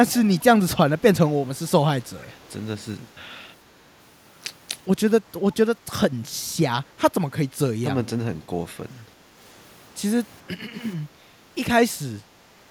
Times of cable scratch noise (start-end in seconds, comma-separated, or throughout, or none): none